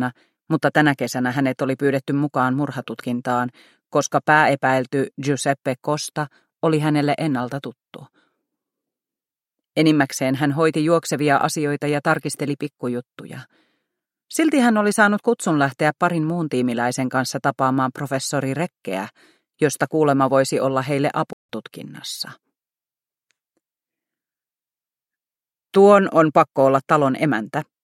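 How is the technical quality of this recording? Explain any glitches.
One glitch stands out: a playback stall from 21.33 to 21.49 s. The audio drops to silence mid-flow for about 163 ms and then resumes. The likely cause is the player running short of buffered data, or its output thread being briefly blocked, so nothing reached the output until it recovered.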